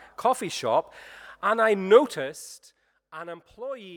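No technical faults can be heard in the speech; the signal holds together with no dropouts, distortion or other disturbances.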